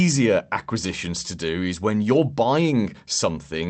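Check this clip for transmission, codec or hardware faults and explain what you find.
Two related timing faults show up in this speech, carried over a call link whose top end stops around 8 kHz.

Clock drift between sender and receiver runs through the whole clip. The delivery has a faintly unsteady, slightly dragging pace, with small hiccups at uneven intervals rather than any single obvious glitch. The cause is a sender clock running about 3% slow relative to the receiver. Audio arrives a little slower than it is played out, so the jitter buffer keeps draining and the receiver has to compensate continuously.

Repeated timing corrections run from 0.06 s to 3.66 s. Playback sits at about 97% speed, and across that stretch the receiver stretches or repeats short fragments, adding about a tenth of a second in total. All of these edits go the same way, padding out the audio, but they fall unevenly, so the rhythm wobbles slightly instead of slowing smoothly. 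Each correction is tiny, which is why they come across as slight stumbles in tempo rather than clear dropouts.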